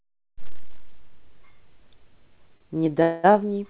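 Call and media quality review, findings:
Short stall from a late packet, 2.57–2.62 s: brief held stretch of the sound with a slight buzz or dip, about 30 ms of fill. Jitter buffer ran dry while one packet was late; receiver extended the last audio, then resumed where it stopped. Nothing lost.

Call audio freeze, 3.02–3.33 s: sound freezes into a fading buzz or hiss for roughly 0.2 s, never reaching silence, then carries on unbroken. Likely packets delayed in transit emptying the jitter buffer; concealment filled about 211 ms, pushing playback later, with nothing dropped. All audio band-limited to 4 kHz, consistent with a G.711 A-law 64 kbps call path.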